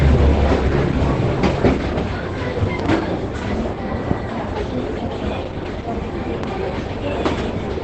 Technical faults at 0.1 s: Opus compression

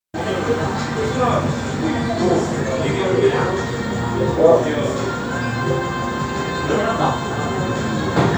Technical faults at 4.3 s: none

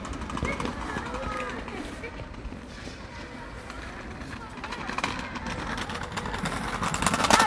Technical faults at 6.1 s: wrong sample rate

